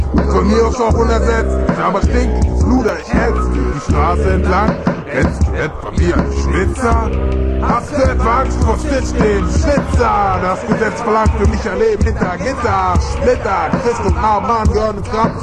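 From 2.78 to 3.03 s, a burst of processor overload crackle cuts across the sound. For about a quarter of a second, the processor falls behind. It fails to deliver its small audio buffers on time, several in a row. Each missed buffer is simply skipped, leaving a tiny hole with hard edges. The gaps are only a few milliseconds each, which fits buffers of around 5 ms. Packed together, they produce a gritty, tearing crackle. It stops once the load eases.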